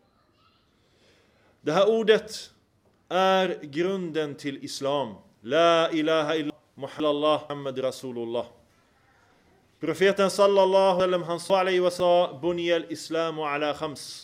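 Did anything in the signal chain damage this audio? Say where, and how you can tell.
Yes. Chunks out of order at the buffering or network stage. At 6.5–7.5 s and again at 11.0–12.0 s, a 500 ms chunk plays one chunk late, after the chunk that should follow it. Nothing is missing, but each swap jumbles the audio, with three hard joins.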